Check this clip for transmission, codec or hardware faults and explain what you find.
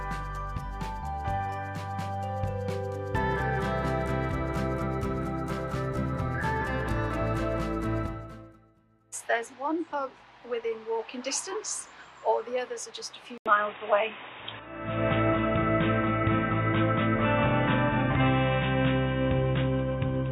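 One fault shows up, from 13.38 s to the end. An input switched to a poorer device is the likely cause: the recording path appears to change to a different, narrower-band microphone or a headset's call profile partway through. After a gap of about 80 ms, nothing remains above 3.8 kHz, so the sound turns dull and boxy. The level shifts by a few decibels, and a new background noise appears, roughly 40 dB below the signal.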